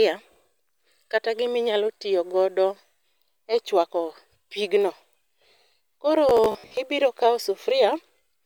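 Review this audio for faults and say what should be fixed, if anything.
From 6.29 to 6.77 s, just before "ibiro kawo", robotic sound from repeated short buffers appears as a rigid metallic buzz at 66.8 Hz. The likely cause is audio arriving too seldom, so a chunk of about 15 ms is looped, replacing roughly two fifths of the sound. A spectrogram shows flat harmonic lines at multiples of 66.8 Hz, and the waveform shows identical repeating cycles. A larger jitter buffer and steadier audio delivery would prevent it.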